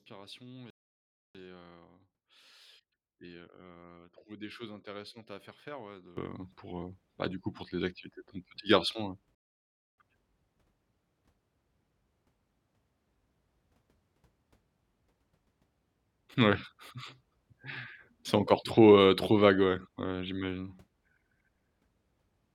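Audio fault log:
0.70–1.35 s and 9.35–9.98 s, rebuffering stall: playback ran out of downloaded audio and halted, inserting 0.64 s then 0.63 s of silence before resuming exactly where it stopped, the first just before "et heu".
6.17 s to end, sudden gain jump: digital gain was likely switched without a ramp after "faire faire ouais de", so speech and background noise leap together by about 20 dB and stay there.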